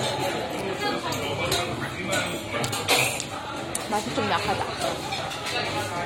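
From start to finish, the audio has likely been through AAC compression at a low bitrate. The encoder had too few bits for its spectral data, and the damage fits AAC-LC at around 32 kbps. The band is cut off low, with nothing above it. Below that, coarse quantisation of the remaining frequency lines makes the sound dull and smeared, with a plainly audible warbling, fizzy texture on sustained and noisy passages.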